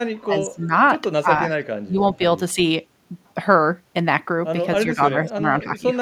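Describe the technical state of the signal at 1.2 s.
Speech suppressed in double talk, 1.21 to 1.29 s: the speech level drops sharply, by roughly 20 dB at its deepest, for around 70 ms. The likely cause is an echo canceller that confused the talker with loudspeaker echo while both sides spoke and attenuated everything.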